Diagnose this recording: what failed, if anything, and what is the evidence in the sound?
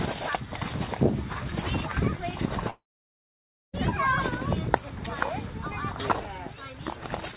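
At 2.7 s the sound breaks off into a short fading tail of continued sound and then about 0.93 s of silence, returning at 3.75 s with roughly 1.04 s of material simply gone. This is a long network dropout, likely at the network stage. Packets stopped arriving, the receiver's concealment briefly extended the last sound before giving up to silence, and playback resumed from later audio. The narrowband G.711 mu-law call path, with nothing above 4 kHz, is audible around the gap.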